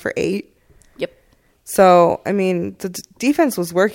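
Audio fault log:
No faults detected in this speech recording; playback runs without interruption or audible defect.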